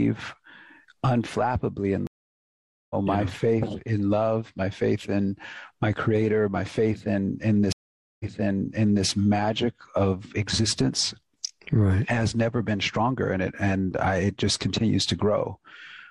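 At 2.07 s a stream reconnect cuts the audio for 0.83 s, then resumes about a second further on. At 7.72 s another drops out for 0.48 s and restarts 0.85 s earlier, repeating sound. Each time, a fresh decoder starts mid-stream.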